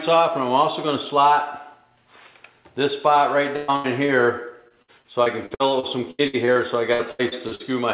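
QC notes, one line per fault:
3.56–3.70 s and 3.76–3.86 s, burst of packet loss: Two bursts of packets arrived too late or not at all, leaving holes of about 120 ms and then 80 ms. The receiver filled each hole by carrying the last sound forward and fading it down, so each gap is a decaying continuation of what came just before. Playback then picks up further along, and the audio that belonged in each hole, about 120 ms and 80 ms, is gone.
4.06–4.10 s, short concealed packet loss: About 20 ms of the stream missed the decoder's deadline. The receiver patched the hole by extending the preceding sound, either from its pitch or as shaped noise depending on what was there, then crossfaded back into the real signal. The result is a brief smear or wobble lasting a couple of hundredths of a second, and any very short sound at that point may be lost.
4.68–6.57 s and 6.93–7.62 s, repeated packet loss (robotic sound): Packets dropped or arrived late over and over. 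The first run has 11 gaps with about 425 ms concealed in total, the longest 79 ms, covering 22% of the span. The second has 5 gaps with about 243 ms concealed, the longest 77 ms, covering 36%. Each hole is bridged by continuing the last sound, and the next hole follows soon after. That gives a choppy, robotic texture with pieces missing. The chopping is denser in the second run. On this narrowband call path, which fits G.711 A-law, nothing is heard above 4 kHz.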